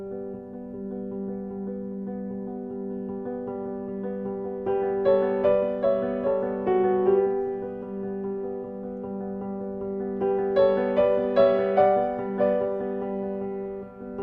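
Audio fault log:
Nothing to log here, as no technical faults turn up anywhere in this clip.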